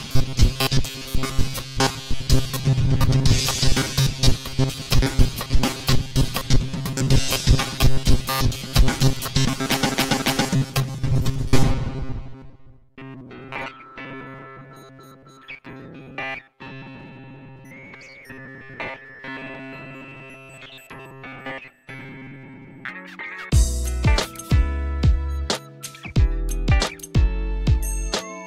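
From 0.01 s to 22.9 s, audio likely reached the playback software too seldom, so it kept repeating a short buffer of about 7.5 ms in place of the skipped material. That forces a fixed 133 Hz pitch onto most of the sound, giving robotic sound from repeated short buffers: a rigid, metallic buzz.

Between 9.92 s and 10.47 s, a block of compressed data about 278.6 ms long, which fits a run of a few frames, was written twice more after its first play. These repeated frames are heard as a stutter, and they add 0.56 s.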